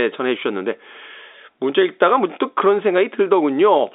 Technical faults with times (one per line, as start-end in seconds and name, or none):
none